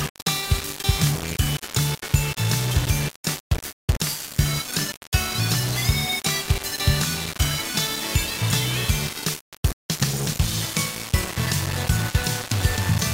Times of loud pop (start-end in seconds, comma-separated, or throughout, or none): none